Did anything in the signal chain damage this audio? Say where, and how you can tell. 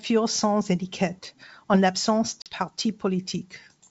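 Yes, there's packet loss on an ADPCM call at the network stage, from 2.42 to 2.56 s, right after "sans étiquette en l'absence". About 40 ms, roughly two packets' worth, turns to hard-edged silence. The G.722 decoder's predictor and step size lose sync with the sender's, so the speech returns slightly distorted before settling.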